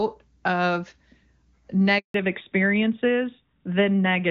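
A speech recording carried over a mobile call, with two linked faults. At 1.98 s a handover gap cuts the sound. It fades within a few tens of milliseconds and stays silent for about 160 ms, until 2.14 s. The phone was switching networks, and no speech frames arrived during the switch. From 2.14 s to the end, there is a fallback to narrowband. Before the gap, the HD Voice wideband codec sounds clean, which fits AMR-WB at its top rate. After it, nothing remains above 4 kHz, and the speech turns duller and rougher. That points to the older AMR-NB codec at about 12.2 kbit/s.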